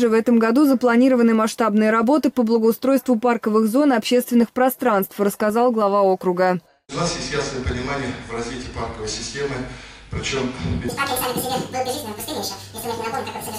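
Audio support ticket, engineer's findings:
From 10.89 s to end of clip (13.58 s): audio read two samples at a time (double speed). Playback runs 2x fast, pitch up 12 semitones, one octave. Probable component: decoder or reader misinterpreting frame layout, treating mono samples as stereo pairs or as double-width samples. Spectrogram: all harmonics jump up one octave at 10.89 s. Waveform: events compressed to half duration.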